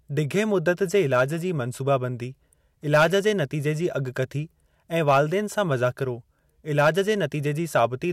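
Hard clipping at 0.39–1.22 s, 2.94–3.27 s, 5.08–5.21 s, 6.79–7.00 s and 7.76–7.85 s: speech peaks overrun the stage by about 2 to 7 dB, get sliced flat, and crackle harshly, worst near 3 s.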